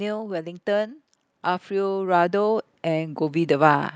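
Speech, and from 1.68 s to the end at 3.95 s there's automatic gain rising: the AGC judged the input too quiet and crept up about 11 dB, swelling voice and background together.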